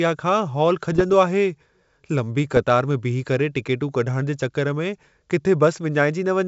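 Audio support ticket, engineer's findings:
Bit errors on ADPCM link, 0.92–1.06 s: pops plus rough crackly burst, brief level jumps. Flipped bits corrupt the decoder's step size and predictor, so each hit rings on for milliseconds. Waveform: clustered spikes; spectrogram: broadband vertical streaks.

Second burst at 2.52–2.60 s: shorter, same signature. Error rate low, a fraction of a percent. Probable component: the radio or transmission link feeding the G.722 decoder.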